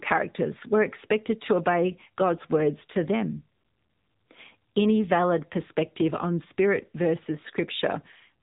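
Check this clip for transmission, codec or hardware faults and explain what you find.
One fault runs through the whole clip: AMR narrowband mobile codec damage. Nothing passes above 3.8 kHz. Speech is rebuilt from sparse pulses driving a vocal-tract model. The plainly buzzy, synthetic tone fits a mode near 8 kbps.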